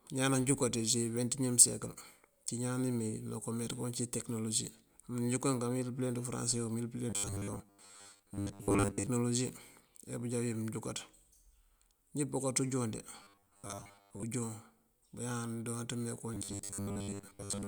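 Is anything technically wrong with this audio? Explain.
Yes. Robotic sound from repeated short buffers occurs at 7.10–9.07 s, after "unjon de" at 13.23–14.25 s, and at 16.34 s to the end. The speech becomes a rigid 100 Hz metallic buzz, likely from a 10 ms buffer looping over most of the audio. Unlike flanging, its pitch never shifts.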